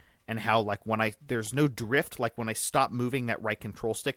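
From 1.15 to 1.99 s, after "how like when I", speech stutters through nine stalls of up to 14 ms: repeated stalls (stutter), as late packets drained the jitter buffer.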